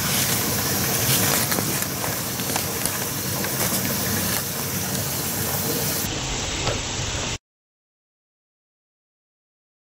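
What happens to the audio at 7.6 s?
At 7.6 s the audio is inside a stretch of interleaved audio read as planar that runs from 6.06 s to the end at 9.82 s. Each block of about 10.67 ms, which fits a 512-sample block, holds alternating left and right samples, but the first half is taken as one channel and the second half as the other, so each half plays at half speed inside its slot. With blocks this short, the sound turns dull and robotic, buzzing at about 93.8 Hz with no clear octave drop.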